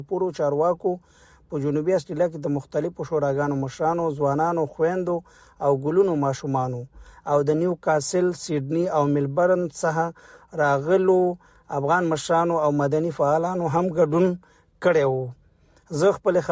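No technical faults can be heard anywhere in the audio. Nothing in it calls for a timestamp or a fix.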